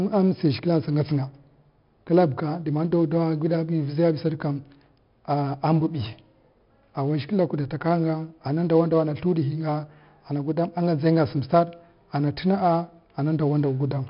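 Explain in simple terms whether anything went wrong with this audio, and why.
Something did go wrong, and it lasts the whole clip. The speech has been squeezed with 4-bit ADPCM compression. Each sample is stored as a tiny step away from a guess, so every sample carries a small error. That error shows up as a gritty hiss riding on the louder speech. Sudden sounds come out roughly, because the steps can't grow fast enough. The damage here is heavy. Nothing is left above about 5.3 kHz, so the sound is also dull.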